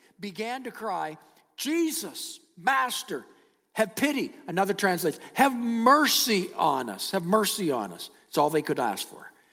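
In this speech clip, the voice and background swell upward together from 0.35 to 3.11 s by about 9 dB, then again from 3.68 to 5.78 s by about 5 dB. This is automatic gain rising: the gain control judged the input too quiet and lifted its gain gradually.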